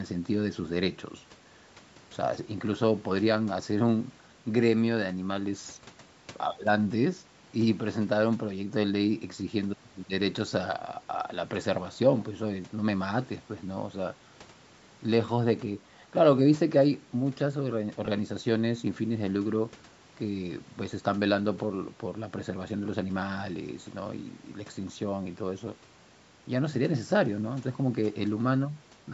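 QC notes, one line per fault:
18.06 to 18.08 s, lost LE Audio frames: about 20 ms of sound drops out, fitting two 10 ms frames. The decoder repeats the last spectrum with random signs, leaving a brief noisy smear.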